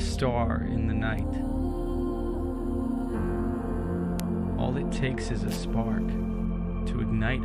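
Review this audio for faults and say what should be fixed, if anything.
Two bit error spikes occur, at 1.19 s and 4.20 s. Each is a single sharp tick that bears no relation to the surrounding sound: a flipped bit makes the sample value jump by a power of two and snap straight back. The first peaks at about -21 dBFS and is consistent with one corrupted sample. The second, at about -9 dBFS, looks like two adjacent ones. On a waveform each shows as an isolated needle, and on a spectrogram as a thin vertical line across all frequencies. Prevent them by using error-checked digital links and ECC memory in the capture and storage chain.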